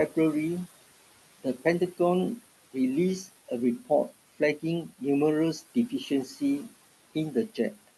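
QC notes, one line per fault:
Throughout, noise suppressor artifacts: the steady background is pulled down by about 17 dB between phrases and comes back up underneath them, leaving a residue. Unlike a speech cut, it is the noise that rises and falls rather than the speech.
6.1 to 6.41 s and 7.48 to 7.89 s, speech cut by the noise suppressor: in each span roughly 150 ms of quiet speech is treated as noise and turned down, by up to about 11 dB and then about 16 dB, so that speech sounds swallowed. Unlike the residue, the speech itself is turned down.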